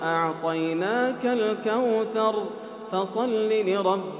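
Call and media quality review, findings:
Nothing to flag here; the audio tops out around 4 kHz, as you'd expect from a narrowband call leg, which fits G.711 mu-law at 64 kbps, and there's nothing else worth raising in this ticket.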